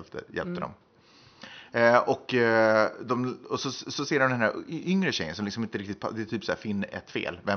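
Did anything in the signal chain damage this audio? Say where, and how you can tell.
No, nothing in the chain has damaged this speech; the only thing underneath it is the room's own background noise, sitting about 41 dB below the voice, which was captured at the microphone rather than introduced by any stage after it.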